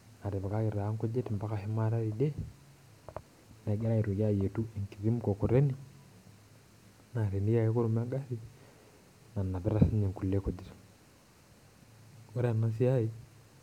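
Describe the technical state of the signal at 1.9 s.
At 1.9 s the speech carries imaging from linear upsampling, present across the whole clip. The rate was raised by joining samples with straight lines. That interpolation filters weakly. The top of the original band sounds dulled. A faint mirrored copy of the spectrum sits from about 11 kHz up to about 22 kHz, around 45 dB below the signal. The gap points to a source near 22 kHz raised to 44.1 kHz. It adds a light metallic shimmer to sibilants.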